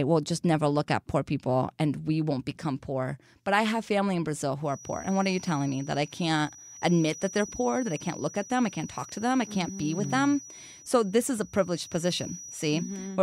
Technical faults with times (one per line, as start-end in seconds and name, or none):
4.60-13.22 feedback whistle